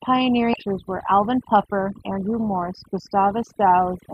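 Overdone noise removal runs through the whole speech clip. The suppressor was set too aggressively, so frequency bands near its noise estimate are pulled down or shut off along with the quieter parts of the voice. The background falls to near silence dotted with twinkling specks. Unlike a plain low-pass or muffling fault, the damage flickers band by band rather than cutting the top end evenly.

At 0.53 to 0.55 s the audio skips ahead. Roughly 0.7 s of sound was dropped while later audio was already queued, and nothing fills the jump, so the two sides butt together almost directly. That lack of any pause or fill is what separates it from a dropout, which leaves silence or a concealment smear.

From 0.67 to 3.11 s a jitter buffer speed-up follows. The receiver, holding more audio than its target, trimmed short pitch-period pieces again and again to cut delay, running the speech about 7 percent fast and removing about 150 ms in all. 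Pitch stays unchanged, which distinguishes it from a sample-rate mismatch, so the voice just sounds hurried.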